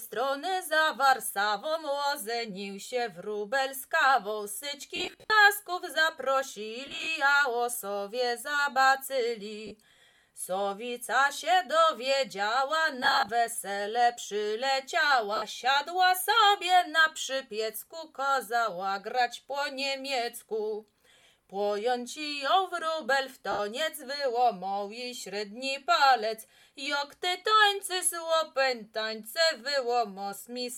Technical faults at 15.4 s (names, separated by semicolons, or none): lost LE Audio frames